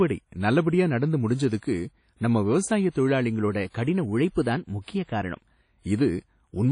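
A speech recording with a washy, ringing quality throughout, a hiss that rises and falls with the speech, and nothing above 10.1 kHz. The codec damage is plainly audible. This is likely WMA compression: a transform codec that codes the sound in long blocks smears quantisation noise over tens of milliseconds around each sound, and at a rate that fits about 32 kbps it discards weak spectral detail and cuts the top band. From 3.48 s to 5.41 s, the speech suddenly runs 5.61% faster and sits 94.6 cents higher, close to a semitone, before returning to its original speed and pitch. Speed and pitch move together because the playback rate itself changed. That points to a drift correction step, likely from clock-matching software that altered its rate in one jump to rebalance its buffer, far beyond the fraction of a percent such corrections normally use.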